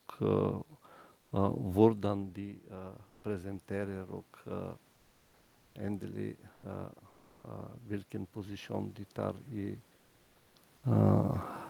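In this speech recording, the sender's discontinuous transmission (likely Opus DTX) stops sending audio during pauses, so the receiver substitutes comfort noise in place of the background at 1.21–1.31, 3.09–3.23, 6.53–6.63 and 7.09–7.43 s. The quiet room background, some 33 to 41 dB below the loudest speech, turns briefly into flat, featureless hiss, shifting by about 1 to 4 dB. Separately, automatic gain rising follows a drop of about 15 dB in the input around 2 s, when the talker moves away from the microphone. The gain control slowly adds about 5 dB between 2.09 and 4.78 s, so voice and room noise swell together.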